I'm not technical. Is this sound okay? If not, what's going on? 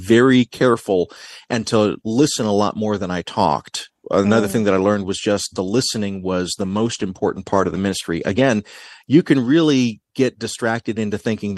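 No. From about 6.54 to 9.89 seconds there is a call bitrate drop: the call's connection judged it had less room, so the system squeezed the speech into far less data for a few seconds, at its tightest for about 1.3 seconds. With so little to work with, fine detail and the crisp top end get thrown away, so the speech sounds rough, watery or muffled until the connection recovers and the clarity returns.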